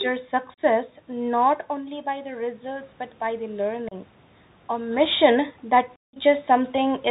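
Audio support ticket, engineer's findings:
Narrowband, scratchy speech throughout: nothing above 4 kHz, granular hiss under the voice, harsh grainy s sounds, and distortion where loud high content outruns the adaptive step. Probable component: Bluetooth CVSD headset codec. One-bit up/down delta modulation, with a sound that fits a 64 kbps CVSD link. Separate from this, level shifts near 1.5 s and 4.5 s are the talker moving and part of the recording.

Abrupt dropouts with hard edges, the voice briefly quieter on return. Probable component: unconcealed Bluetooth headset packet loss. Lost voice packets are replaced by silence or an idle pattern instead of being concealed. 0.54–0.60 s: about 38 ms gap, suggesting roughly ten packets lost. 3.89–3.94 s: 30 ms hole, consistent with around seven packets. 5.96–6.18 s, right after "mission that": a 173 ms hole, the longest, pointing to roughly fifty packets dropped.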